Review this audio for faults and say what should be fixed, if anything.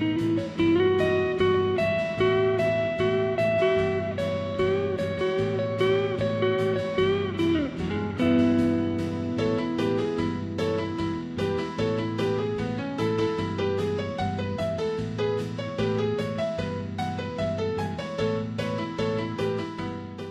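Nothing here needs fixing, as there is no audible disturbance anywhere in the recording.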